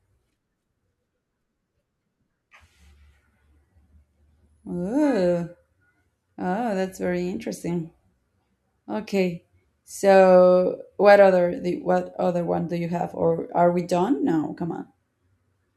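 No technical faults can be heard anywhere in the speech.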